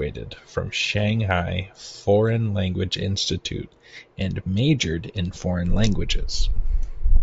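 No audible faults in this speech recording; nothing to flag.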